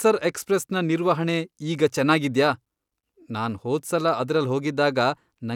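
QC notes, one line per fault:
No faults found on this speech clip; the signal path gives nothing to flag.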